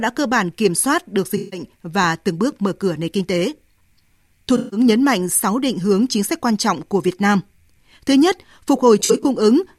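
AAC frame loss with concealment occurs at 1.37–1.60 s, between "bản kiểm soát được" and "và từng bước mở"; at 4.57–4.80 s, before "nhấn mạnh"; and at 8.99–9.25 s. The decoder rebuilt the missing stretches from the last good spectrum. That covers about 0.15 s in each of the first two and brief scattered gaps in the last, and it leaves smeared, noisy patches.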